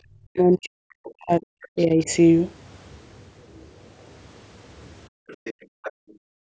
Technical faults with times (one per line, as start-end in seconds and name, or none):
0.00-0.05 background gated by the echo canceller
0.33-2.08 speech suppressed in double talk
1.05-1.10 other side's voice leaking through
1.65-1.85 other side's voice leaking through
5.09-6.48 background gated by the echo canceller
5.28-5.92 other side's voice leaking through